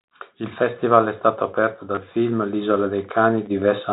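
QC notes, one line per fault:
1.95–1.97 s and 3.46 s: packet loss with last packet repeated. Audio briefly stutters after "festival è stato aperto". The replayed chunks fit 10 ms packets.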